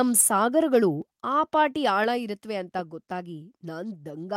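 It's a short speech clip, and right at the start, from 0.16 to 0.22 s, there's microphone overload: the peaks run about 5 dB past the converter's limit, so roughly 7% of the samples get their tops sheared off and you hear a harsh crackle, likely from the mic input gain being set too hot. Then at 2.04 s, between "ಆ ಪಾಟಿ" and "ಇರತ್ವೆ ಅಂತ", the microphone volume steps down by about 4 dB in one go, with voice and background dropping together, likely the call software reacting to the earlier clipping and pulling the input level back.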